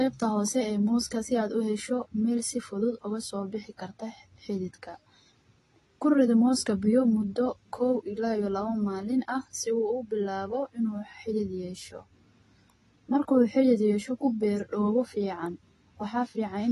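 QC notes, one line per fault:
Throughout, AAC compression: the speech sounds dull and smeared, with nothing above 12 kHz and a plainly audible warbling, fizzy texture on sibilants and held vowels. The likely cause is AAC-LC coding at a low bitrate, which fits about 32 kbps. With so few bits per frame, the encoder cuts the top band and quantises the remaining frequency lines coarsely, leaving spectral gaps that shift from frame to frame and shimmer.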